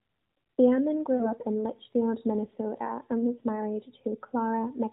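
Between 1.16 and 1.32 s, lost AMR speech frames leave about 40 ms undecodable, which fits two 20 ms frames. The decoder repeats its last good pitch and vocal tract settings at falling gain, so the speech smears, sags, then returns briefly rough.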